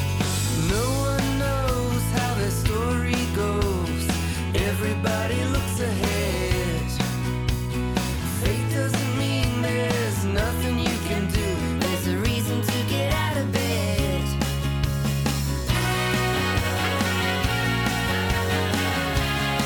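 From 11.79 s to the end, the audio turns hurried and higher, a section at the wrong speed running 1.12 times too fast and about two semitones sharp, likely from a clock mismatch during editing or playback.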